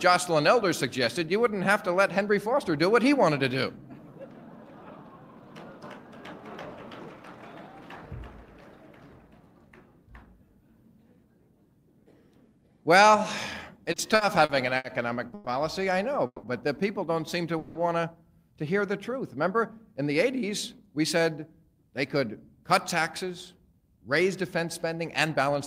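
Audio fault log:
13.83–15.48 s, repeated stalls (stutter): the sound drags and catches eight times, the longest hold 120 ms, 310 ms filled in all (about a fifth of the span). Late packets kept draining the jitter buffer, and the receiver stretched the last sound until playback could resume. Nothing is missing.
16.26–16.45 s and 17.58–17.77 s, call audio freeze: each time the sound hangs for 170 ms as a continued tail of the previous sound, the first ending in 50 ms of silence, then resumes where it stopped. The likely cause is packets held up in transit emptying the jitter buffer, which pushed the delay out 170 ms each time.
20.87–25.60 s, jitter buffer speed-up: the audio runs 4% fast at unchanged pitch. The receiver was draining a backlog by cutting short pitch-period-sized slices again and again, about a fifth of a second in total.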